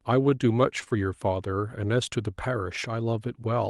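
A short concealed packet loss begins at 0.79 s and runs to 0.95 s, with two more inside it at 0.84 to 0.88 s and 0.88 to 0.93 s. Each time about 20 ms of audio, which fits one lost Opus frame, missed the decoder. The receiver patched each gap with 22, 28 and 22 ms of extrapolated sound and dropped 9 ms during the first recovery. The result is a brief smeared wobble in the speech, over the 12 kHz call bandwidth.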